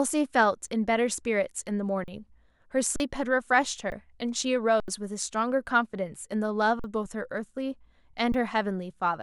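The speech stalls seven times with an underrun with held sample: at 0.67 s, 2.04–2.08 s, 2.96–3.00 s, 3.90–3.92 s, 4.80–4.88 s, 6.79–6.84 s and 8.32–8.34 s. Each time the output buffer ran dry and the converter froze on its last value. The waveform runs flat, and the spectrogram shows a blank vertical strip. Live audio lasting about as long as the gap is lost.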